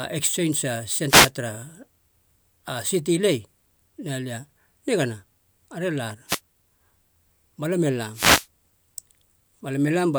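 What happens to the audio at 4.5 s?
Nothing goes wrong at 4.5 s: the speech carries on intact through that moment, with no dropout, click, distortion or other fault to be heard.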